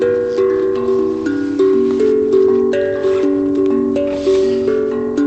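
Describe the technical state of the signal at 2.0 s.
At 2.0 s the signal is intact, with nothing wrong beyond the ordinary coding character and roughly 8 kHz bandwidth limit of the Opus call path it travelled through.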